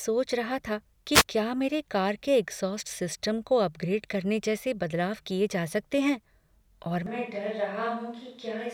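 Speech, with two separate problems. At 1.13 to 1.24 s a wireless microphone noise hit cuts in as a brief swish of static lasting about a tenth of a second. The FM radio link fades when reflected signals cancel at the receiver, and its hiss rises over the voice for that moment. A digital dropout would be a silent gap or a hard glitch. This is a burst of noise that swells and clears. From 7.06 s to the end, the sound suddenly turns roomy and hollow, with thinner bass, a level roughly 5 dB lower and more background room noise, though that noise stays well below the speech. This is most likely a switch to a distant microphone, such as a camera's, after the close microphone dropped out. Added reverb or EQ would keep the close-miked level and noise floor. Here the tone, level and room noise all change at the same instant and stay changed.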